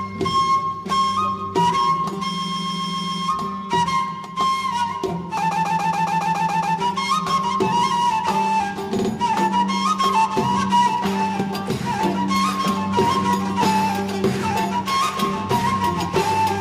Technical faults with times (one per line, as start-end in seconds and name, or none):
2.41-3.25 repeated frames
5.50-6.76 repeated frames
8.97-9.09 repeated frames